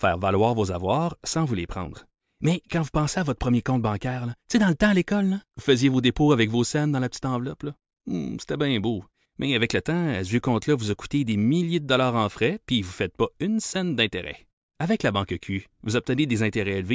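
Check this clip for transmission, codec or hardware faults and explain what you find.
Nothing stood out here: the speech comes across steady and intact, with no transmission, codec or hardware trouble to point to.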